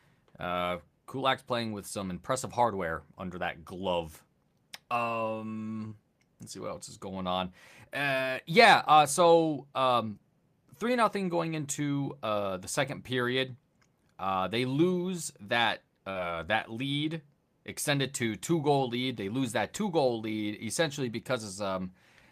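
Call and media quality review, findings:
Short concealed packet loss, 5.87–5.94 s (before "let's see what else") and 16.11–16.18 s (between "they lose that" and "that lead extended to"). About 40 ms of audio missing each time. Receiver's concealment extended the preceding sound, then crossfaded back, leaving a brief smear.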